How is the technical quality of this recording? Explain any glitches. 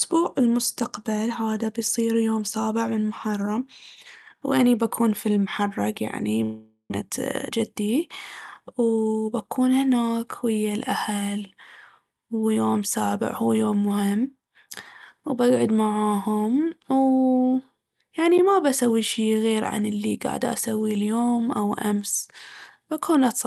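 The recording has two clear glitches in the speech, both clustered between about 6.4 and 9.1 s. The whole clip has the coding noise of a call codec, with a high-frequency cut near 12 kHz that fits a call codec such as Opus.

Long network dropout, 6.43 to 6.92 s: the sound smears into a fading buzz, then drops to about 0.1 s of near-silence before the speech resumes with roughly 0.3 s missing. This is likely a packet outage the receiver papered over. On a spectrogram it shows as blurred, decaying harmonics and then a blank gap.

Jitter buffer speed-up, 7.02 to 8.09 s and 8.60 to 9.05 s: after the dropout the buffer held about 150 ms too much audio, so the receiver trimmed pitch-period-sized pieces. The speech runs about 8% faster and then about 14% faster, at unchanged pitch, and sounds rushed. It removes roughly 100 ms and 70 ms. The waveform shows slightly compressed syllable spacing without any visible gaps.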